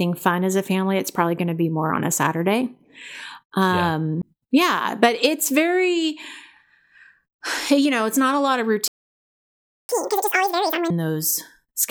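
Speech, with three playback faults. At 4.22 s there is a CD skip: a knock or a flaw made the laser jump onto another turn of the disc's spiral, so the player mutes for about 10 ms with a tick and then resumes from a different point in the recording, giving an abrupt discontinuity in the speech. On a waveform this shows as a tiny flat gap with mismatched signal on either side. A spectrogram shows a thin vertical broadband line where the speech harmonics break and restart out of alignment. From 8.88 s to 9.89 s a playback stall cuts the sound mid-flow for about 1.01 s. The likely cause is that the player ran dry of buffered data or its audio thread was blocked, and output held silent until it recovered. The waveform drops to a flat line for that whole second, and the spectrogram shows a clean dark column with hard edges at both ends. Right after it, from 9.89 s to 10.90 s, comes catch-up at higher speed: the backlog is resampled at 2.0 times normal speed, so the speech rushes by with its pitch raised by about 10 semitones before snapping back to normal. 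On the spectrogram the harmonic stripes spread upward and widen in spacing, syllables look compressed in time, and everything drops back at 10.90 s.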